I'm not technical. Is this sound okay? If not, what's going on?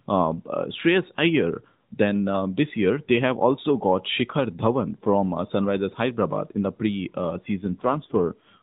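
No. From 7.6 to 8.6 s, an AMR rate drop: the phone network briefly squeezed the call into fewer bits, so the voice turns rougher and more robotic.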